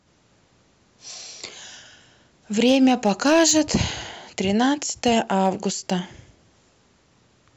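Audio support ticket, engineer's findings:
Hard clipping, 2.60–3.75 s. Speech peaks cut flat, about 4 dB over full scale. Crackle on peaks. Probable component: gain stage ahead of the converter. Flat tops add high harmonics. Second event, 5.06–5.49 s. Same symptom, milder, about 2 dB over. Crackle on peaks only. Same stage likely overdriven by input level. Check preamp or software gain before the ADC.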